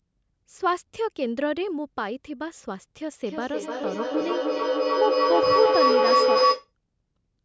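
From 3.11 s to 6.72 s, a feedback howl takes over the speech. Two devices in the same room were on the call, so sound from one loudspeaker kept re-entering a microphone and coming back louder each trip. Unlike an echo, whose repeats fade, these grow and narrow into a tone around 500 Hz. It pulses roughly every third of a second with each pass around the loop and peaks about 6 dB above the speech before it is cut off.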